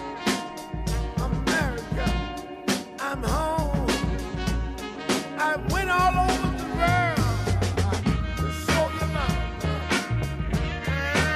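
No technical faults can be heard anywhere in this audio.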